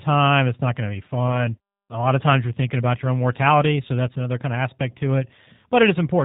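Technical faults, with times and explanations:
Throughout: G.729 codec. The speech is plainly marked by low-bitrate coding, which fits an 8 kbit/s G.729A stream. Each 10 ms frame is rebuilt from a vocal tract filter, a pitch predictor and a sparse set of pulses, not from the waveform itself. The result is band-limited audio with nothing above 4 kHz, so sibilants lose their edge. The speech stays intelligible but sounds rough and slightly synthetic.
1.28–1.37 s and 2.98–3.01 s: VoIP packet loss concealed by the speech codec. The first dropout follows "not going to be". The second comes after "of times you're thinking" and before "your own mortality so". Each gap fits a single lost 10 ms frame. The decoder fills it by extending its last pitch and filter at falling gain, which stretches the sound into a brief fading tone or noise. Because each frame depends on the one before, the distortion lasts beyond the missing 10 ms and spans roughly 86 ms and 34 ms.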